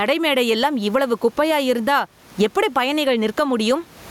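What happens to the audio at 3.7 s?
At 3.7 s the speech is in the gain pumping that runs through the whole clip. Gain is likely set too high, with a fast limiter clamping each loud sound, so the gain swings around 15 dB, loud and soft parts end up closer in level, and the speech sounds squashed.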